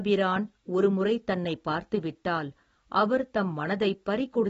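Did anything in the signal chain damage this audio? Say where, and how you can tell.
Yes, at the codec stage, and it runs the whole length of the speech. Nothing comes through above 7.6 kHz, so sibilants sound dull and blunted, and there's a clearly audible smeary, warbly texture on sustained sounds. That's most likely AAC compression, AAC-LC squeezed to a bitrate around 24 kbps: with so few bits, the encoder drops the top of the band and coarsely quantises what's left, giving that fizzy smear.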